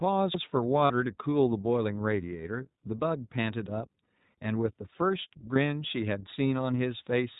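The whole clip carries iLBC codec coloring. Speech is band-limited below 4 kHz and sounds slightly rough and synthetic, consistent with 20 ms frames at 15.2 kbps.

Lost iLBC frames occur at 0.86 to 0.91 s and at 5.54 s. The decoder repeats the last pitch cycle with noise, giving a brief buzzy held vowel that recovers at once. The first lasts 40 ms and the second 20 ms.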